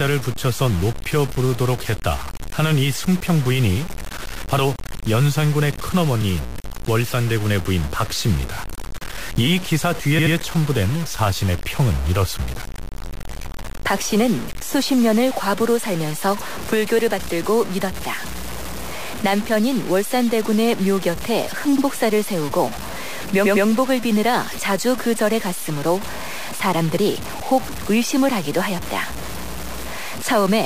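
Gritty, grainy distortion follows the speech from start to finish, with noise only about 15 dB below it. The likely cause is low bit depth without dither, consistent with 4-bit truncation. Repeated frames cause brief stutters: at 10.18 s a 78 ms chunk plays twice more, at 21.77 s a 52 ms chunk once more, and at 23.45 s a 105 ms chunk twice more.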